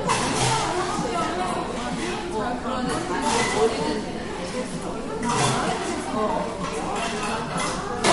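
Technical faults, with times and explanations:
Throughout, MP3 compression, likely: nothing is left above about 11.2 kHz, so the top end is sheared off flat, and plainly audible swirling, watery artefacts run through the sound. That pattern points to an encoder starved of bits, which fits a low bitrate around 48 kbps. It drops the treble at a fixed cut-off and lets faint frequency lines vanish and return from frame to frame, leaving that unstable, bubbling texture.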